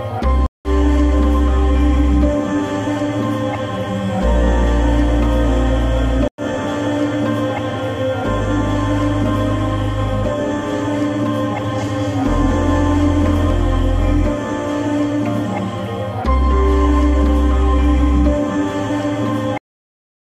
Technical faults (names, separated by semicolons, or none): stream reconnect; cut-off end